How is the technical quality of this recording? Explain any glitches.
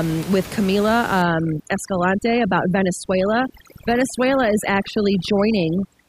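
The speech is marred by overdone noise removal from 1.22 s to the end of the clip. Before that point, room noise sits about 15 dB below the speech. From 1.22 s, a noise reduction stage set far too aggressively clamps individual frequency bands down or out whenever their level drops close to its noise estimate. The pauses collapse into near silence dotted with twinkling specks, and the softer components of the speech are cut along with the noise.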